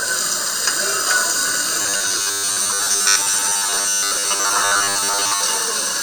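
Everyday sound carrying robotic sound from repeated short buffers from 1.82 to 5.43 s: a rigid 100 Hz buzz, likely from a repeated 10 ms buffer, rather than silent dropouts.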